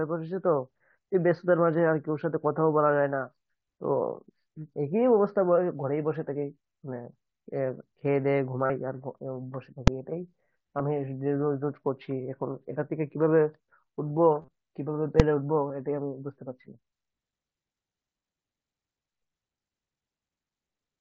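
At 7.05 s there's a tiny glitch, a concealed Bluetooth headset packet loss lasting about 15 ms. The link between headset and phone dropped voice packets, and the receiver filled the hole by repeating the closest-matching slice of the preceding 20 ms or so, so it's almost invisible. A longer run at 8.66 to 8.70 s is easier to catch: the fill holds a buzzy tone at full level for roughly 40 ms, with a little warble when real speech comes back. 10.78 s is another near-hidden 15 ms patch. At 14.40 to 14.48 s the losses are scattered across about 75 ms, with the longest unbroken stretch 30 ms, giving a short buzzy, choppy patch. 15.69 s is one more quick 15 ms fill. Throughout, the mSBC headset codec's 8 kHz speech band comes through as expected.

Between those, at 9.88 s and again at 15.20 s, there's a single hard bang each time. That's invalid numbers at full scale. Somewhere in the processing a calculation produced infinite or invalid values, and they were forced to the loudest possible sample value for a whole block. 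Each block is only about 2.7 ms, which fits a 128-sample buffer, so the loud edges at its start and end run together into one sharp click rather than two separate pops.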